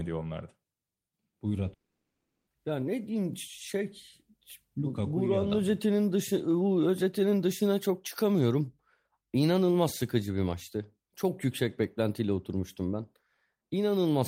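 At 1.73 to 2.49 s, a fading buzz replaces the speech, then 0.57 s of silence; that stretch never returns, likely a long network dropout.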